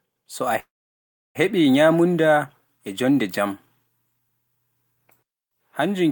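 At 0.59 s the speech stops and a call audio freeze begins. The last sound carries on briefly as a fading buzz, then gives way to about 0.68 s of silence. At 1.37 s the speech resumes exactly where it broke off, with nothing skipped. The pause simply inserts about 0.76 s, so everything after runs that much later. The likely cause is packets held up in transit, leaving the jitter buffer empty until they arrived.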